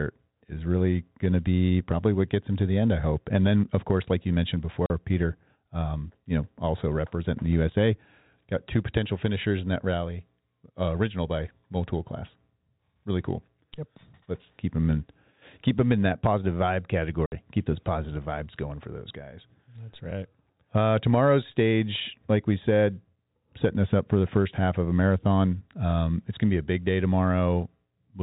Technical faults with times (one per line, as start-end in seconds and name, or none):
4.86-4.90 packet loss filled with silence
17.26-17.32 packet loss filled with silence